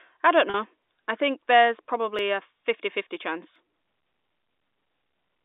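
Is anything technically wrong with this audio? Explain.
Yes, there are two faults.

At 0.5 s, just after "I don't", the sound briefly holds on a slightly buzzy tone for about 40 ms. This is packet loss with pitch repetition: a gap, consistent with two lost packets, was bridged by repeating the last pitch period and fading it out.

From 0.82 to 4.92 s, a regular click recurs every 1.36 s, about four times in all. The likely cause is clock drift buffer slips. Two clocks disagree by roughly 0.1%, so the buffer between them periodically drops or repeats a block of roughly 70 samples. The clicks sit within the telephone band of 250 Hz to 3.7 kHz.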